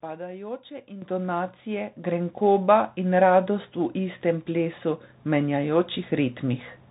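Throughout, the speech passes through the Bluetooth CVSD headset codec, whose one-bit delta coding cuts everything above 3.8 kHz and leaves scratchy sibilants over a granular hiss. At 1.02 s the microphone volume is stepped up by about 10 dB, then again at 2.04 s by about 4 dB, so voice and background jump louder together each time.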